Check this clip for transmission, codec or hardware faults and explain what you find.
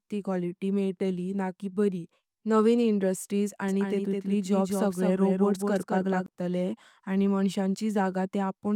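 One fault turns up. A doubled audio track runs from 3.68 to 6.26 s. A second full-band copy of the speech trails the original by around 200 ms, roughly 5 dB quieter, likely from a slower second capture path. It sounds like a dry, clean echo with no room tail, and it switches on and off abruptly.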